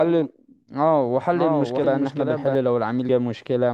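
From 1.32 s to 2.55 s a doubled audio track is present. A full-band copy of the speech, about 5 dB quieter, trails the original by roughly 0.7 s. It has no decay or room colour, and it cuts in and out abruptly. It is likely a second capture through a slower path.

At 1.84 s and again at 3.09 s, compressed frames are skipped. The audio jumps ahead by roughly 200 ms and then roughly 70 ms, which fits whole 32 ms frames going missing.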